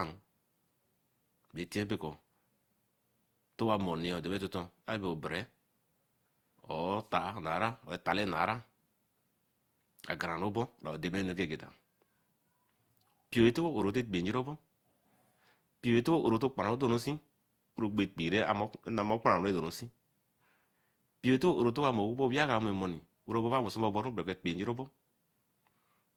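From start to finish the speech has a swirly, hollow, smeared character, and consonant attacks blur, more than a single pass at a rate like Opus 64 kbit/s would give. This is likely generation loss: around five successive lossy re-encodes, each adding its own quantisation noise.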